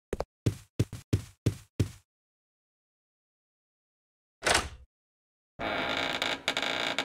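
At 0.84 s the audio jumps out of sequence for about 0.19 s, until 1.02 s. These are chunks out of order. Two blocks of about 93 ms each swap places. The later block plays first, and the block that arrived one chunk late follows it. No sound is lost. The order breaks, though, and three hard joins cut into the sound. It comes across as a brief jumbled stutter. The same swap happens again from 6.13 to 6.32 s.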